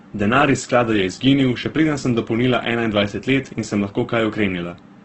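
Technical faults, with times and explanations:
Throughout, Opus compression: the speech is band-limited, with nothing above about 8.1 kHz, and its tones sound heavily roughened, grainy and noisy rather than swirling. This is likely Opus in its music mode at a very low bitrate, which fits roughly 12 kbps. Short of bits, the encoder keeps each band's energy but fills the detail with folded copies of lower bands or with noise, and the narrowed wideband range removes the upper spectrum.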